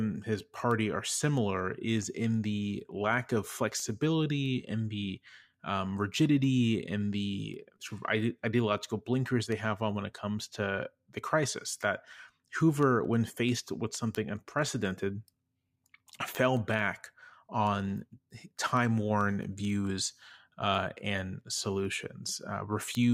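Brief, regular ticks run under the speech from 0.27 s to 22.95 s, roughly five per second, about a hundred in all. These are word clock ticks. The receiving device is free-running on its own clock rather than locked to the sender's digital stream, here off by something like 100 ppm. Each time the two clocks drift a sample apart, the receiver drops or repeats a single sample, producing one tick at every slip.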